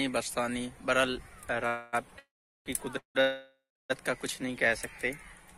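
Packets were likely held up, emptying the jitter buffer: call audio freezes at 1.67–1.95, 2.19–2.68, 2.98–3.17 and 3.21–3.92 s stretch the last sound into a fading buzz, mostly decaying to silence, before the sound resumes where it stopped. Then, from 4.28 to 4.68 s, a jitter buffer slow-down repeats pitch periods to add 41 ms, so the sound runs at 91% speed with the same pitch and slightly drawn-out sounds.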